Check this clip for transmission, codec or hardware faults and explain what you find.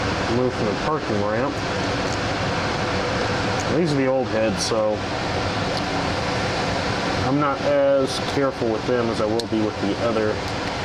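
Nothing faulty can be heard anywhere in this clip.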